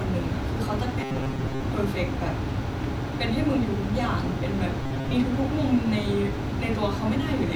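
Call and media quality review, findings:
Robotic sound from repeated short buffers, 1.01–1.62 s and 4.83–5.13 s. Speech turns into a rigid metallic buzz at 133 Hz, still loosely tracking the syllables. Likely cause: playback starved of new audio, repeating the last chunk of about 7.5 ms. Roughly half of each stretch is repeat rather than fresh audio. The skipped speech is lost. Component: jitter buffer or playout path.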